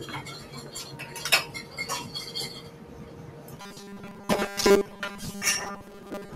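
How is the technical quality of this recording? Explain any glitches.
The recording has two glitches, the second running to the end.

From 2.7 to 2.85 s, sound was cut by the noise suppressor: mistaking part of the audio for noise, it pulled that stretch down by about 4 dB.

From 3.56 s to the end, the likely cause is repeated short buffers: audio arrived too slowly, so most of it was replaced by repeats, producing a robotic 200 Hz buzz, which fits a roughly 5 ms buffer.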